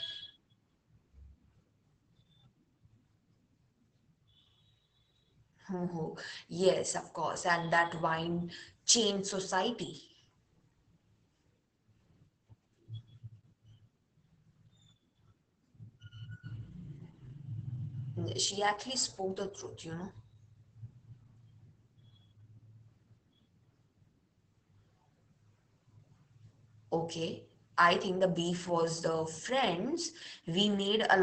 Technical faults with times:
0.00-31.22 Opus voice compression

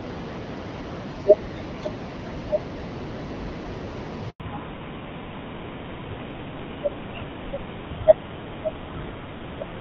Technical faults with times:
0.00-9.80 computer activity noise
4.30-4.40 handover gap
4.40-9.80 fallback to narrowband

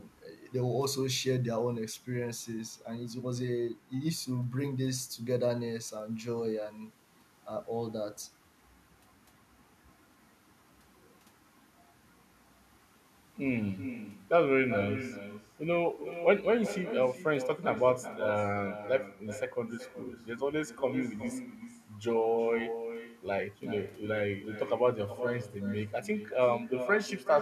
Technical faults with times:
0.00-27.41 echo with no canceller

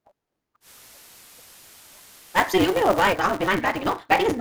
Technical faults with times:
0.00-4.40 block size mismatch (truncated)
0.60-3.19 digital radio blending to analogue

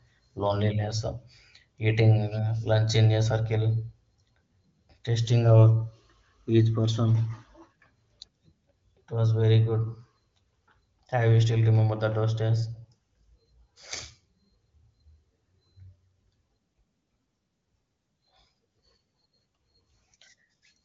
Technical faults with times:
none

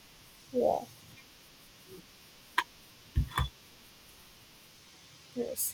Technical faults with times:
0.76-5.01 clock drift buffer slips

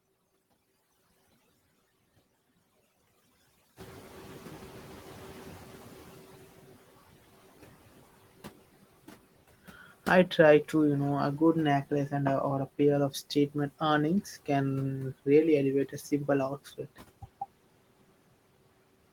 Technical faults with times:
0.00-19.13 overdone noise removal
3.76-6.82 noise suppressor catching up
16.57-16.98 speech cut by the noise suppressor

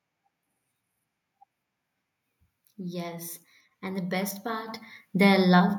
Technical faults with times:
4.68 microphone volume stepped up

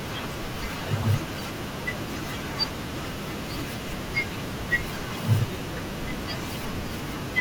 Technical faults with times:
1.00-1.05 damaged data in a compressed stream
4.57-4.60 damaged data in a compressed stream

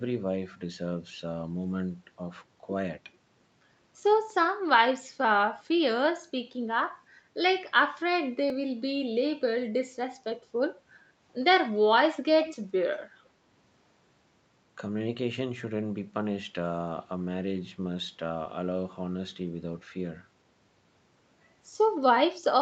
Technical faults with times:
3.52 audio missing between chunks
8.50 audio missing between chunks
12.44-12.56 echo leak
13.48 audio missing between chunks

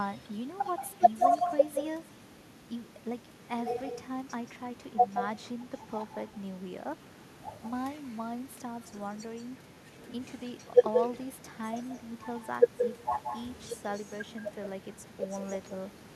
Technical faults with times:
0.00-16.15 echo with no canceller

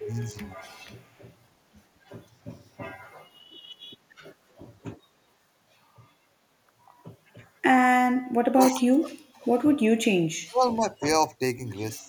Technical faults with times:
0.00-0.64 speech suppressed in double talk
0.69-0.89 echo leak
2.10-2.82 speech suppressed in double talk
4.58-4.62 speech suppressed in double talk
8.34-9.50 speech suppressed in double talk
9.97-11.05 speech suppressed in double talk
11.97-12.09 speech suppressed in double talk

